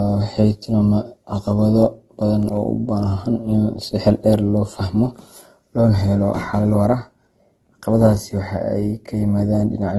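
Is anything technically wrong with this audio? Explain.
Yes. Throughout, the speech carries the artefacts of more than one codec heard together, with nothing above 12.1 kHz; this is likely transcoding between lossy codecs, a low-bitrate encode such as 16 kbit/s Opus re-encoded to AAC-LC, stacking both codecs' artefacts.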